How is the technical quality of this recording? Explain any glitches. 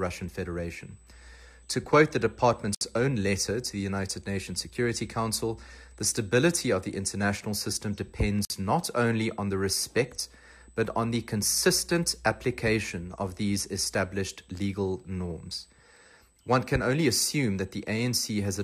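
The recording has two technical faults: a constant high whine and two brief dropouts.

USB whine: current drawn in the bus's 125-microsecond microframes leaks into the audio path, adding a steady 8 kHz tone roughly 40 dB below the signal throughout.

Gap at a join of encoded pieces: separately encoded sections were joined untrimmed, leaving encoder delay and padding silence. The sound cuts out from 2.75 to 2.81 s (66 ms) and from 8.45 to 8.50 s (51 ms), then resumes where it stopped.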